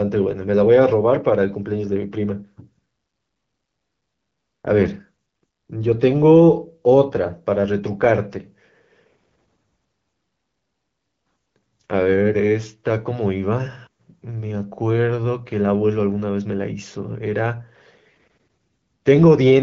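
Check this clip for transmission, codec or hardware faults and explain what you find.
No transmission, codec or hardware faults can be heard in the speech. It passes through an AMR wideband (HD Voice) link at 12.65 kbit/s, which leaves only light coding traces and nothing above 7.5 kHz.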